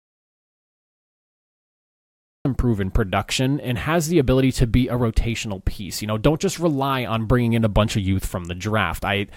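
The clip opens in an audio dropout to silence that is already under way, lasting until 2.45 s, when speech resumes mid-flow with "proven production and has". The gap is silent with no room tone or hiss, which separates it from a quiet pause or a gated passage. The input was likely lost while the recorder kept writing silence, so whatever came before that point is missing.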